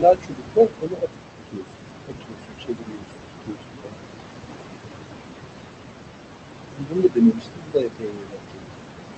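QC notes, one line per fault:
Throughout: noise suppressor artifacts. The suppressor pulls bands it judges to be steady noise down by about 21 dB frame by frame, so the room noise, only about 6 dB under the speech, dips between phrases and swells back beneath them.
0.00–1.15 s, 2.06–4.07 s, 6.72–8.77 s: speech cut by the noise suppressor. With noise this close to speech level, the suppressor mistakes quieter speech for background and drops it by as much as about 22 dB, roughly a second, a second and a half and two seconds of each span, so endings and soft sounds come out swallowed.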